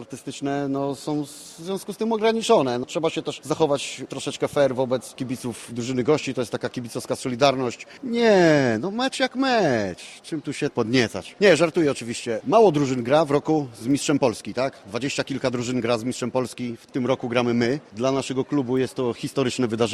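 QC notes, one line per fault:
No fault to note, so this QC line stands alone.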